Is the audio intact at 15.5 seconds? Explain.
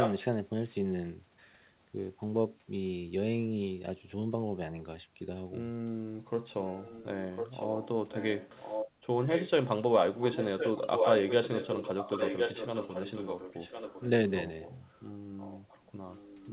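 No, there is an echo leak from 15.37 s to the end at 16.52 s: a faint copy of the speech returns about 1.06 s late, roughly 20 dB below it, likely because a far-end loudspeaker's sound reached its microphone and the echo canceller didn't fully remove it.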